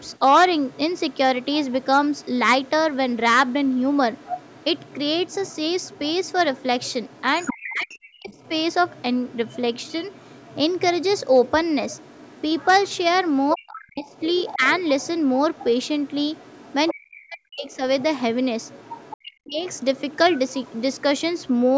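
Speech recording with a faint second voice, the other side's voice leaking through, running from the start to 21.52 s at roughly 25 dB below the talker, likely residual loudspeaker echo the canceller missed. The talker is suppressed in double talk at 7.53–8.3 s, 13.53–14.63 s, 16.93–17.69 s and 19.21–19.6 s, dipping by around 40 dB, likely while both sides overlap, with the call path's band limit at 8 kHz.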